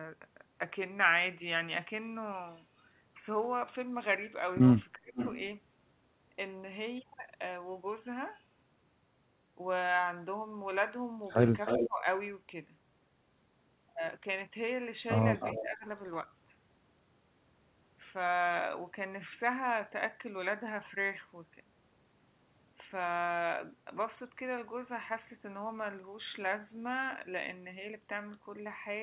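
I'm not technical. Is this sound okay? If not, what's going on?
No. There are two problems, and they turn up together three times.

The first is an echo leak, at 5.16 to 5.37 s, 11.55 to 11.89 s and 15.4 to 15.64 s. You hear a delayed copy of the voice, lagging about 470 ms the first time and about 300 ms the other two. Someone on the call is most likely using a speakerphone, and the echo cancelling there isn't catching everything its microphone picks up.

The second is speech suppressed in double talk, at 4.98 to 5.17 s, 11.77 to 12.06 s and 15.61 to 15.86 s. Each time, the voice suddenly gets much quieter for a fraction of a second, right as both sides are talking at once. The echo canceller likely can't tell the real talker from the echo, so it turns both down.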